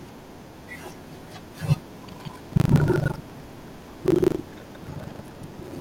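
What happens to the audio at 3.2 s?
At 3.2 s the speech is inside a stretch of buffer tearing running from 2.04 s to the end. Writer and reader have slipped, so somewhat under half of each 40 ms period replays audio from roughly 150 ms earlier. This gives a steady 25 Hz robotic rattle that, unlike a fixed hum, drops away whenever the sound stops.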